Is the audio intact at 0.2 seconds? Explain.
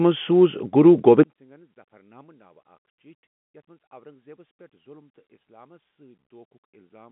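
Yes, the speech is intact at 0.2 seconds, coming through the G.711 telephone coding with its usual narrow phone-line band and nothing heard above about 3.8 kHz.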